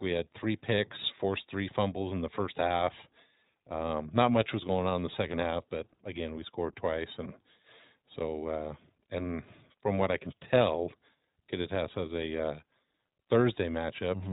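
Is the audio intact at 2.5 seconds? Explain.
No, at 2.5 seconds the speech is running through the iLBC codec, as it is for the whole clip. Everything above 4 kHz is gone, so it has that thin narrowband phone quality. Each short frame, which sounds like 20 ms ones, gets its excitation coded on its own without borrowing from the one before, and that leaves the voice plainly rough and a bit synthetic. The damage fits a rate around 15 kbps.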